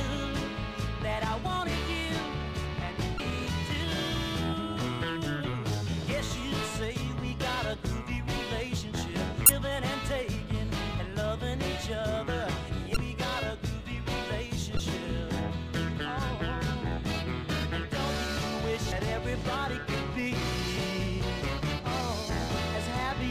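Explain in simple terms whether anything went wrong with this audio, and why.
Yes: short chirps or blips break into the sound at 3.16 to 3.20, 9.46 to 9.50, 12.93 to 12.97, 14.76 to 14.80 and 18.92 seconds. This is damaged data in a compressed stream. Corrupted bytes confuse the decoder, which garbles those moments while it searches for clean data.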